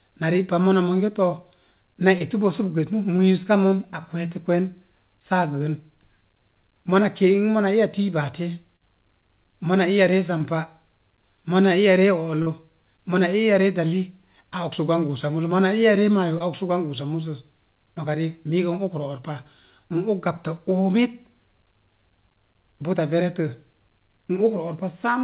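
Short concealed packet loss at 2.18, 3.16, 8.76, 10.38, 12.42 and 16.38 s: 20 to 40 ms never arrived, and the extrapolated fill makes brief smears or wobbles in the band-limited, 4 kHz-topped speech.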